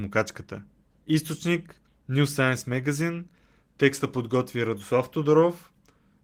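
There are no technical faults in this speech clip to describe in time order.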